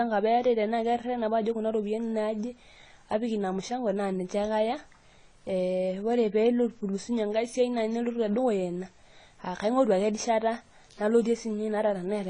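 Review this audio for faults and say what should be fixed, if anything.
Throughout, the speech sounds dull and smeared, with nothing above 9.9 kHz and a fizzy texture, likely AAC compression whose low bitrate, around 24 kbps, discards detail. Encode at a higher bitrate or deliver the uncompressed source to prevent it.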